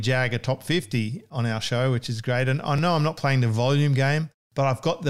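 At 2.78 s and again at 4.32 s the speech jumps, each time losing only a few milliseconds, likely a dropped buffer (overrun) where the samples were overwritten before being read. There is no silent gap as with an underrun, just a splice.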